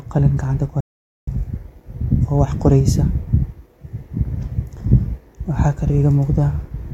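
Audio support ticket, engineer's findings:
Audio dropout to silence, 0.81 to 1.27 s: speech cuts off mid-flow, then 0.47 s of silence with no room tone, unlike a gate or fade. Likely input lost (device disconnect, link failure or mute) while the recorder kept writing.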